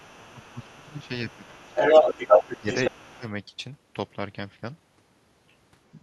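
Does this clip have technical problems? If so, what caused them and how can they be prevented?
Yes. The other side's voice leaking through is audible from 0.00 to 1.09 s at about 25 dB below the talker, from 1.29 to 2.90 s about 10 dB louder than the talker, and faintly from 3.11 to 3.19 s. The likely cause is the talker's loudspeaker feeding the far end back into the microphone, with the echo canceller failing to remove all of it. That residue lets a second voice ride along under, and at times over, the main one. Prevention: use a headset, or lower the speaker volume and give the canceller a cleaner, properly aligned reference signal.

Speech suppressed in double talk pulls the talker down at 0.16 to 1.12 s (about 20 dB at its deepest), 1.36 to 1.69 s (about 15 dB), 2.59 to 2.68 s (about 15 dB), 2.89 to 3.25 s (about 25 dB) and 5.99 to 6.03 s (about 10 dB). Most of these dips line up with the stretches where the other side is heard. 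That points to the echo suppressor likely mistaking overlapping talk for echo and attenuating everything together. Prevention: tune double-talk detection so near-end speech keeps the suppressor from clamping down, and reduce the acoustic echo in the first place.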